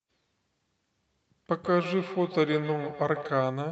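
From 1.61 to 3.41 s there is feedback echo between two devices. One device plays back what the other's microphone sent, and that microphone picks it up again. The speech returns about every 150 ms, thin and ringing, peaking about 12 dB below the direct sound.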